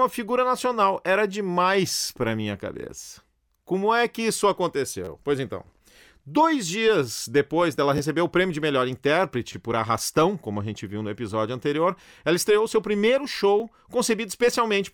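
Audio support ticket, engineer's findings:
Brief buzzy stutters, an 11 ms slice looping with hard joins: 3.04–3.08 s after "demais para minha", 5.05–5.08 s after "é que isso", 7.98–8.00 s, 9.53–9.55 s, 10.90 s, 13.60 s. Repeated buffer: playback underrun replaying the last block, fits a 512-sample buffer.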